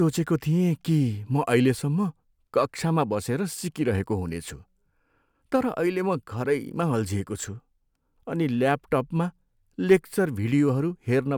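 No technical faults can be heard anywhere in this speech recording.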